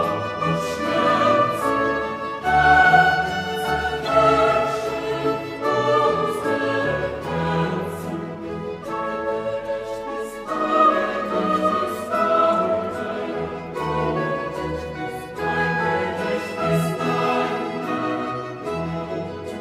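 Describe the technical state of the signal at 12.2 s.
The signal is intact at 12.2 s, with no fault of any kind at that moment.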